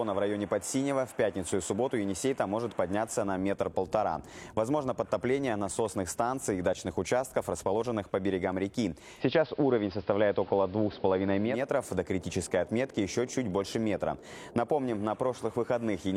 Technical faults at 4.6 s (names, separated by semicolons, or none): none